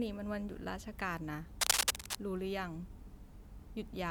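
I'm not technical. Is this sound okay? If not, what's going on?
No. From about 1.61 to 2.16 s there is a burst of cable scratch noise: a dense, uneven scratching and rustling that sits on top of the speech and is noticeably louder than it for about half a second. The likely cause is a worn cable, plug or control being moved. When the metal contact inside shifts, the connection briefly turns patchy, and that crackle is added to the recording.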